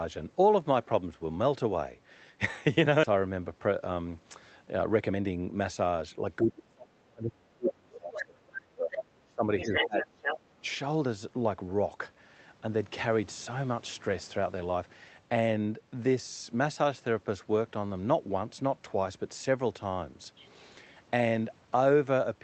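At 3.03 to 3.05 s there is a skip ahead. About a second of audio is missing, and the two sides are joined with no silence and no fill. Playback jumps forward rather than pausing, which separates it from a dropout or a concealed packet loss. It comes from a backlog of delayed audio being discarded, so the delay falls by roughly the same second.

Two jitter buffer speed-up passes follow. The first, at 3.60 to 3.91 s, runs at 109 % speed and removes only a few tens of milliseconds. The second, at 4.81 to 6.29 s, runs at 119 % and removes about a third of a second. The receiver repeatedly cuts out pitch-period-sized pieces to drain excess buffered audio. The sound is hurried but the pitch stays the same, which tells it apart from a sped-up or resampled recording.

From 6.42 to 10.09 s the talker's speech is suppressed in double talk, with dips of up to about 30 dB that add up to roughly three seconds. 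Brief repeats at 10.35 to 10.41 s and 10.61 to 10.65 s each drop about 10 dB. The ducking tracks when the far side is talking, unlike random loss, and is likely an echo canceller clamping down while both sides speak.

Inside that stretch the other side's voice leaks through: a faint scrap at 7.93 to 7.97 s, about 20 dB below the speech, then bursts at 8.14 to 8.25 s and 8.92 to 9.03 s, about 10 dB down. From 9.59 to 10.38 s the leak is about as loud as the talker. It has passed through a loudspeaker and a partial cancellation, which is likely uncancelled echo rather than crosstalk on the line. All of this carries the call codec's coding noise, with nothing above about 8 kHz.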